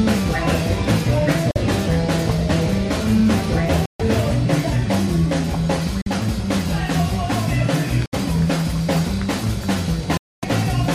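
Five gaps of silence occur at 1.51 s (46 ms), 3.86 s (139 ms), 6.02 s (46 ms), 8.06 s (70 ms) and 10.17 s (255 ms). These are likely Bluetooth dropouts: packets arrived too late and were discarded, so output stopped, then resumed further along as though the missing audio had played.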